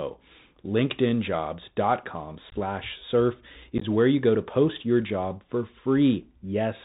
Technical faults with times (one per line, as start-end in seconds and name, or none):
0.00-6.85 Bluetooth CVSD headset codec
2.49-2.55 unconcealed Bluetooth headset packet loss
3.78-3.84 unconcealed Bluetooth headset packet loss